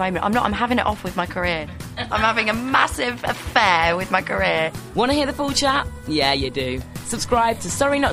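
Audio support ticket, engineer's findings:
Clock slip clicks, 0.17–7.96 s: faint single-sample ticks about every 0.3 s, metronome-regular unlike random dropouts. Likely unsynced device clocks, roughly 70 ppm apart.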